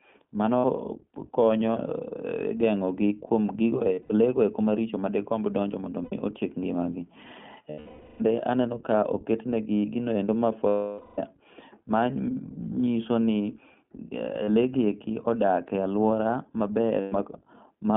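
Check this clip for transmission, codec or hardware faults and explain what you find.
Two faults are present: iLBC coding across the whole clip, plus seven bursts of lost iLBC frames.

The iLBC codec narrows the speech to a 150 Hz to 3.4 kHz telephone band. It codes each 20 ms frame independently, which leaves the voice plainly rough and synthetic. This fits the 15.2 kbps mode. On a spectrogram nothing appears above 3.4 kHz.

Lost iLBC frames occur at 0.58–0.66, 3.94–4.12 (scattered, longest run about 70 ms), 6.04–6.14, 7.70–8.22, 10.68–11.19, 14.44–14.50 and 17.00–17.14 s. In each gap the decoder repeats the last pitch cycle mixed with noise, so you hear a held, buzzy vowel. On a spectrogram this shows as flat, smeared harmonics. In the waveform it appears as a repeating periodic pattern that fades during the two 500 ms losses.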